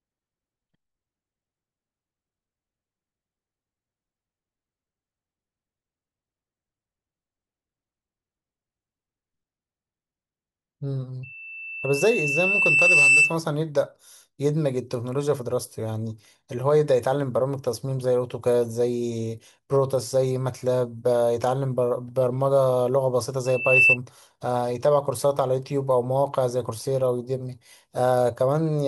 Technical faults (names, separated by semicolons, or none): loudspeaker feedback squeal